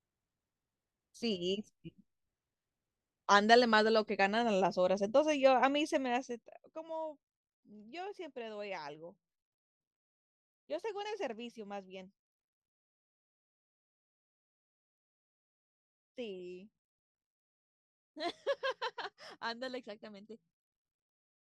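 No technical faults can be heard anywhere in this speech recording.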